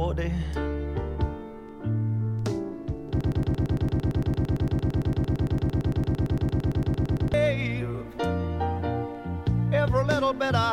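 From 3.21 to 7.34 s, a 113 ms fragment repeats back to back, a broken-record loop, likely from a stalled player or stream resending its last buffer.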